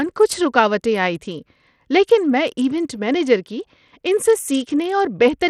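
Speech with Bluetooth SBC compression throughout: the treble flickers and vanishes under gritty noise. A spectrogram shows patchy, gapped upper bands, likely from a starved bit pool fitting about 80 kbps.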